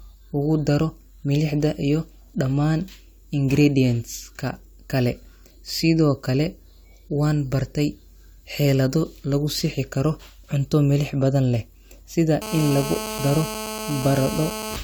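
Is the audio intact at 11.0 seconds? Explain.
Yes, the speech at 11.0 seconds is intact, with no dropout, click, distortion or other fault at that moment.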